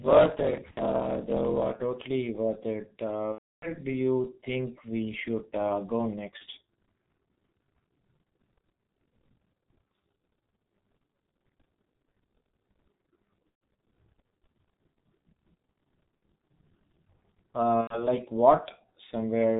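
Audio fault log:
throughout, G.723.1 codec: The whole signal went through the G.723.1 telephony codec at 6.3 kbit/s, which damaged it heavily. The codec carries nothing above 4 kHz, so the speech sounds muffled. Its 30 ms frames and slow-updating model of the vocal tract cannot follow fast changes, so the voice takes on a hoarse, rough texture and consonants smear into one another.
0.0–1.8 s, block size mismatch (truncated): At the start, one stage delivered longer blocks than the next stage took in, and the tail of each block was discarded. The result fits a reading stage that took 1024-sample blocks. Each cut lands at the same rate, so a steady buzz at about 46.9 Hz sits under the audio. Because material is missing, the speech runs 1.12 times fast while keeping roughly its normal pitch. This lasts until just before "worth it".
0.71–0.80 s, 3.32–3.80 s, 6.38–6.43 s, 13.49–13.61 s, 16.16–16.22 s, 17.81–18.06 s, VoIP packet loss concealed by the speech codec: Packets went missing and the decoder filled each gap by extending its last pitch and filter while lowering the gain. 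The gaps last 60, 300, 30, 120, 60 and 90 ms. In each one the sound stretches into a fading buzzy tone or coloured noise, and in the gaps of three or more frames it is muted from the third lost frame on. The longest gap comes just before "you think we should", and the 30 ms one falls right after "we should uh go". Because each frame is built from the one before, the voice stays weak and distorted briefly after each gap.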